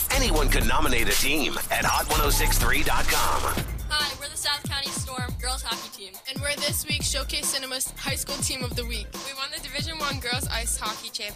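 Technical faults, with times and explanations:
No technical faults can be heard anywhere in the clip, and the signal stays continuous and stable throughout.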